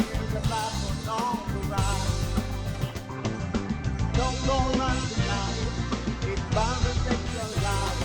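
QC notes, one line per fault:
2.83–7.58 s digital radio blending to analogue: 372 ms cross-fade to FM; spectrogram shows faint hiss; waveform level unchanged.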